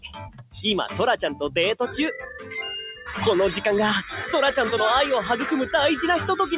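A noise suppressor meant for speech was applied to music or sounds across the whole clip, treating sustained material as noise and pulling its level up and down by around 10 dB, so the sound pumps and thins. The sound cut by the noise suppressor is clearest from 0.00 to 0.64 s, sinking by about 20 dB, and again from 2.28 to 2.52 s, dipping about 7 dB. The call path's narrow band, with nothing above 4 kHz, fits G.711 A-law.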